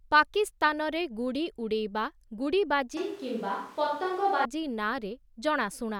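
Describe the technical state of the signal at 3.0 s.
At 3.0 s the speech suddenly turns roomy and hollow with thinner bass, likely a switch to a distant microphone, lasting from 2.97 to 4.45 s at roughly unchanged level.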